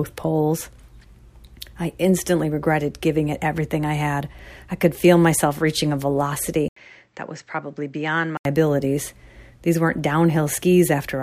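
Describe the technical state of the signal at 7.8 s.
At 7.8 s you're inside a stretch from 6.68 to 8.45 s where the input likely switched to a poorer device. After a brief 80 ms gap, the sound turns dull with nothing above 8 kHz, drops around 10 dB, and picks up a faint new background noise.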